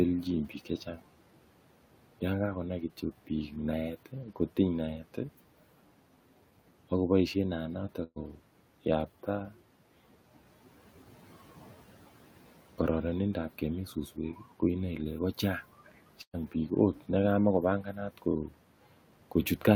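Twice in this speech there's a burst of packet loss: at 8.03 to 8.18 s and again at 16.22 to 16.35 s. Each time about 120 ms of audio never arrived, so the receiver kept stretching the last sound it had and faded it down. You hear a brief held sound that dies away before the speech jumps ahead, with that stretch simply gone. The room noise, about 22 dB under the speech, sits beneath it all.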